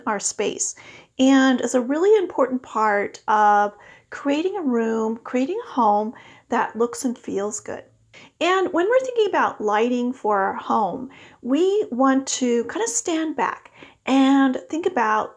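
No dropouts, clicks, distortion, level jumps or other transport faults turn up anywhere in the recording.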